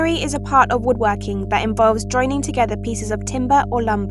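A steady 50 Hz mains hum runs under the speech from start to finish, and it's loud, only about ten decibels below the voice. That points to a ground loop or a transformer nearby leaking the power line into the signal as a constant low drone.

Throughout, the voice also has a breathy, grainy edge, and nothing comes through above 11.6 kHz. It's most likely Bluetooth LC3 compression, with damage that fits roughly 48 kbps in 10 ms frames, where the top end is stripped out and replaced with noise.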